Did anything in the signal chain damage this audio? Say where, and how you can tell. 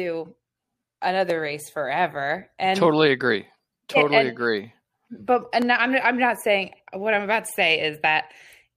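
Yes. The speech has two blocks of digital silence, pointing to the driver or buffer stage. The first is at 1.30 s, just before "race forever and totally". It lasts about 0.73 ms, which fits a 32-sample block. The second is at 5.62 s, between "totally and agree but" and "I'm I'm not saying", and lasts about 0.34 ms. Each gap is heard as a tick or dip rather than as silence. The output buffer was likely not filled in time, so zeros went out instead, with hard edges and no fade.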